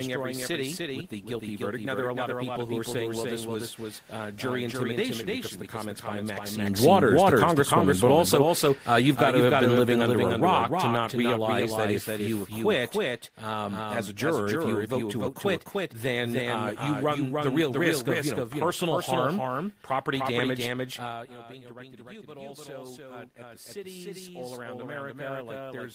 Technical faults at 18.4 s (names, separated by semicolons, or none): doubled audio track